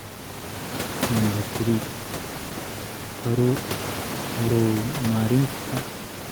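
Nothing's technically wrong with this bit of speech; the only thing under it is some ordinary room noise from where the microphone sits, about 11 dB below the talking.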